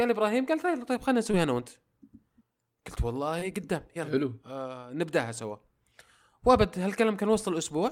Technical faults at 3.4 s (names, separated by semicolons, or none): short concealed packet loss